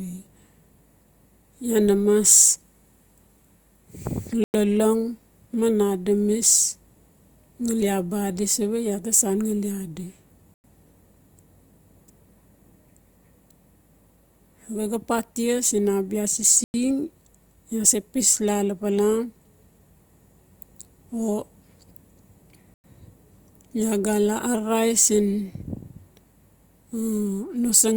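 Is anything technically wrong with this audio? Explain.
Yes. The speech has a gap between chunks: 100 ms holes at 4.44 s (just before "lolong man adamis"), 10.54 s (right after "ngali adi"), 16.64 s and 22.74 s. They recur every 6 s, so the audio was likely joined from 6-second pieces with silence left at each seam. Unlike a dropout, the speech simply pauses and resumes, with nothing cut out.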